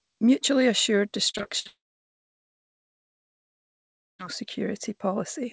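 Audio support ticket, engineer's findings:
Repeated packet loss (robotic sound), 1.30–1.67 s: choppy speech with pieces missing. Jitter buffer/concealment is bridging several short gaps, the longest 60 ms, by extending the previous sound. About 35% of the span is concealed.

Long network dropout, 1.67–4.21 s: a brief fading buzz or hiss, then near-silence for about 2.4 s before speech resumes with roughly 2.5 s of content gone. Likely cause is a network outage, with the receiver's concealment decaying to silence.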